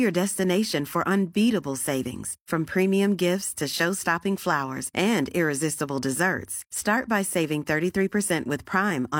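No technical faults are audible.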